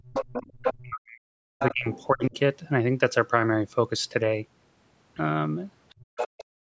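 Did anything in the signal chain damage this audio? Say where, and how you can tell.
Yes. Speech suppressed in double talk, at 0.0 to 0.18 s, 0.77 to 2.35 s and 5.95 to 6.6 s: the main speech dips by as much as 40 dB. The likely stage is call processing, where an echo canceller couldn't separate the local talker from loudspeaker echo and turned both down.

Other side's voice leaking through, at 0.07 to 0.75 s, 1.59 to 2.26 s and 5.89 to 6.24 s: a second voice sits roughly 5 to 10 dB under the main speech. This is likely residual loudspeaker echo that the call's echo canceller left in the microphone signal.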